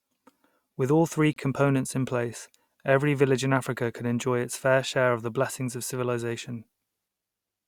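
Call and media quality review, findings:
Hard-edged dropout to silence in the speech, 1.33–1.36 s, about 30 ms, clean cut on both sides. Probable component: stream segmenter/player. Gap between stream segments: timestamps of adjacent 4.0 s segments leave 28.5 ms unfilled, player inserts silence. Nothing lost, timeline stretched. Check segment boundary timestamp alignment.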